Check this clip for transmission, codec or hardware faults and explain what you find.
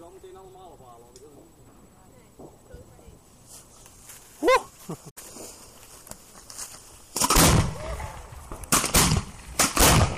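One fault stands out: damaged data in a compressed stream, from 5.08 to 5.18 s. For roughly a tenth of a second the decoder meets corrupted bytes, misreads those frames, loses sync and hunts for the next valid frame header. The result is a brief chirp, squawk, click or short hole in place of the sound.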